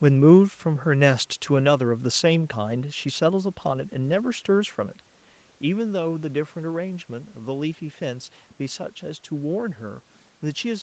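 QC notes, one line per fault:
No system faults are present: the audio carries nothing above 8 kHz, consistent with a call microphone chain feeding a low-bitrate Opus path around 20 kbps, while the room noise beneath it and the level shift near 5 s, as the talker moves relative to the microphone, belong to the recording itself.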